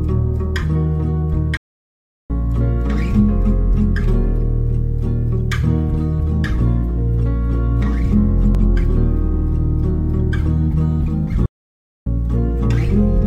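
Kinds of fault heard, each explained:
Playback stall: The player likely ran short of data or had its thread blocked, so output stopped mid-flow. The sound cuts to silence for about 0.73 s at 1.57 s and about 0.6 s at 11.46 s, then carries on.
Damaged data in a compressed stream: Corrupted bytes in the compressed stream made the decoder misread frames and lose sync while hunting for the next frame header. At 8.55 s this comes out as a brief glitch lasting about 44 ms.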